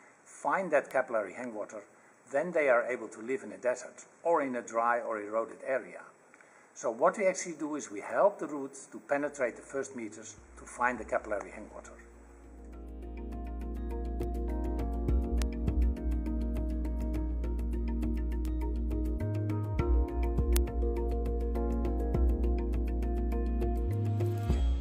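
Sharp single ticks at 0.91, 14.23, 15.42, 18.45 and 20.57 s are bit error spikes: one flipped bit throws a sample, or a run of three at 15.42 s, off by a power of two before it snaps back. Each shows as a narrow needle on the waveform and a thin full-height vertical line on the spectrogram.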